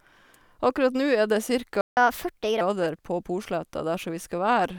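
At 1.81 s the speech just stops dead, and there's silence for about 160 ms until 1.97 s, when it picks up again. That's a playback stall, most likely the player running dry of data or its thread getting blocked for a moment. Right after it, from 1.97 s to 2.61 s, you get catch-up at higher speed. The player rushes through its backlog at 1.25 times normal rate by resampling, so the speech sounds hurried and lifts by around four semitones before settling back to its normal speed and pitch.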